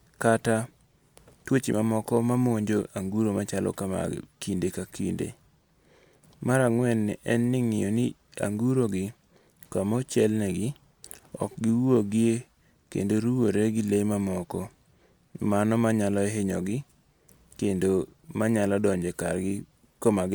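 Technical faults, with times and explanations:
No technical faults can be heard anywhere in this recording.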